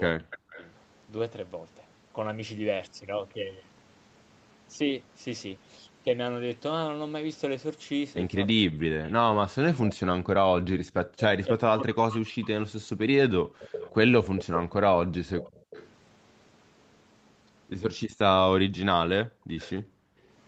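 Right at the start, from 0.23 to 0.61 s, the speech dips hard, by as much as about 40 dB, for roughly 150 ms in total. That's speech suppressed in double talk: with both ends talking at once, the echo canceller likely couldn't tell the talker from the loudspeaker echo and pulled everything down.

Overlapping that, from 0.31 to 0.66 s, a faint delayed copy of the voice trails in about 325 ms behind, sitting about 20 dB under the speech. That's an echo leak, likely a loudspeaker's sound slipping past the far end's canceller and being sent back.

It happens again from 8.48 to 9.13 s, a bit quieter at about 25 dB down. Then from 8.53 to 13.96 s the double-talk suppression returns in a long stretch, with around four seconds of the speech ducked or chopped, again by up to about 40 dB.

The worst echo leak runs from 13.74 to 15.89 s, at only about 10 dB below the speech, so the 325 ms repeat is easy to hear.

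Near its tail, from 15.6 to 15.71 s, the room background drops out by about 37 dB for roughly a tenth of a second. That's background gated by the echo canceller: it clamped the microphone while the loudspeaker played, then let go.

A longer gate follows from 19.26 to 20.21 s, about 36 dB deep and roughly 700 ms in total. Inside it, from 19.59 to 19.71 s, a short scrap of echo slips through at about 20 dB down.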